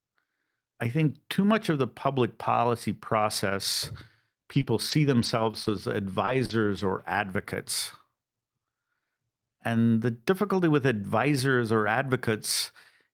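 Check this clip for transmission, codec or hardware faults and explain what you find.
The speech shows packet-loss damage between about 4.5 and 7.5 s, with three related faults.

Scattered short gaps, 4.53 to 5.71 s: about four tiny losses, each about 20 ms at most, 80 ms missing in all, patched by extending the preceding sound. They are heard as isolated ticks and hiccups spread over a second, not one clustered dropout.

Short concealed packet loss, 6.25 to 6.29 s (20 ms missing) and 6.45 to 6.51 s (40 ms missing): the receiver continued the last sound across each hole, then crossfaded back. The result is a brief smear or wobble.

Lost packet rebuilt from error correction, at 6.27, 6.49, 6.77, 7.13 and 7.49 s: each 20 ms frame was replayed from a low-bitrate copy carried in the next packet. There is no gap, just a momentary rougher, noisier texture.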